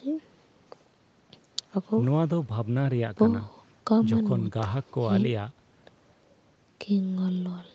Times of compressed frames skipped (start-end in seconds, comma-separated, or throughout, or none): none